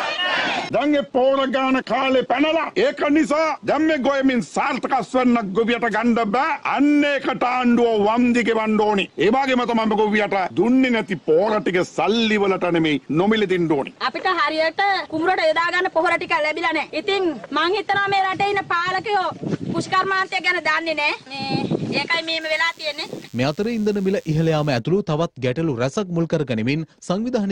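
A thin, steady buzz rich in harmonics sits under the sound from 22.41 s to 24.79 s, about 30 dB below it. This is DECT cordless phone buzz: a nearby handset or base pulsing radio bursts 100 times a second, rectified by the audio circuitry into a 100 Hz tone.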